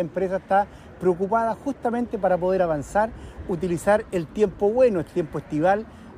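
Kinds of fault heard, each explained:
No faults can be heard anywhere in this recording.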